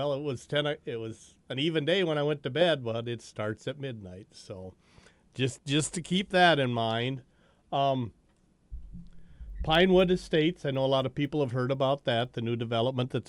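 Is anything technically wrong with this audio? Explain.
Yes. From 9.5 to 12.25 s the resampler restarted on every block, so each block edge has a small error. That gives ticks at a steady 4 Hz, which fits 250 ms blocks in a 24 kHz to 48 kHz conversion. They are heard only while sound is present, unlike steady interference.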